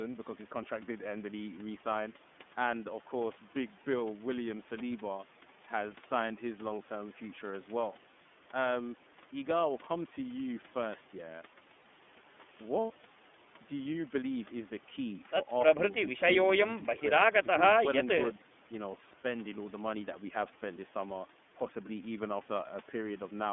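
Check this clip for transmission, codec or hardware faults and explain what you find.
Two faults are present: narrowband iLBC coding across the whole clip, and one lost iLBC frame near the middle.

iLBC codec, throughout: the speech is confined to roughly 200 Hz to 3.5 kHz, and the rough, slightly synthetic texture fits iLBC's 30 ms, 13.33 kbps mode. Each frame's excitation is coded independently, and the resulting coding damage is plainly audible. The call microphone processing also removes the lowest bass, but that is normal.

Lost iLBC frames, 11.82 to 11.86 s: one frame's worth of audio, about 30 ms, went missing. The decoder filled the gap by repeating the last pitch cycle mixed with noise, which sounds like a brief buzzy, held vowel. Because each frame stands alone, normal sound returns immediately afterwards.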